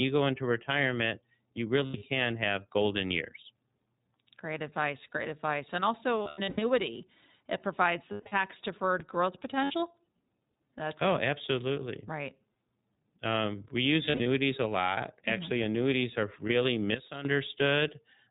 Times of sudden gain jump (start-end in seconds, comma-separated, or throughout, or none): 16.95-17.25